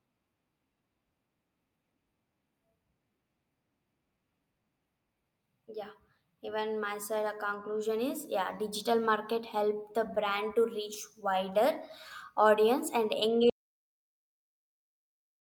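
At 13.50 s, right after "audience and", the speech cuts out into an audio dropout to silence lasting to the end, about 1.9 s. The input was likely lost, leaving silence. The waveform flatlines and the spectrogram goes completely blank, with no room tone.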